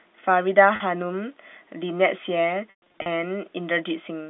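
At 0.76 s and again from 2.70 to 3.06 s, packet loss with pitch repetition breaks the speech. The first gap, 40 ms, is bridged by a repeated pitch period, so it sounds like a briefly held, buzzy note and shows as identical repeating cycles in the waveform. The second loses 240 ms in bursts across 360 ms, the longest 120 ms. There the repeats fade to silence, leaving blank gaps on the spectrogram within the 200 Hz to 3.6 kHz band of the G.711 telephone coding.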